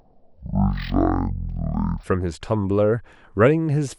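From 0 to 2.04 s, speech drags at half speed an octave low: stereo read as mono, left and right samples played as one channel.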